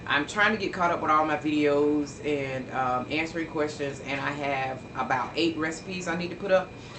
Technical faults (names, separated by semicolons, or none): none